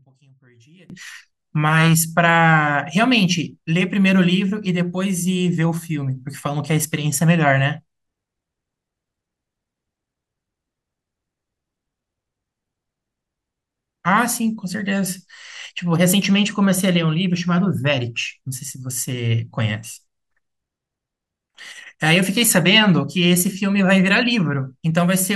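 From the start to 0.90 s, one stereo channel has most likely been inverted in polarity, so the two sides carry the same speech with opposite sign. When they are summed to mono, the shared centre content cancels and the level falls by about 32 dB. The voice nearly disappears, leaving only a faint residue of whatever differs between the channels, before full-level speech returns at 0.90 s.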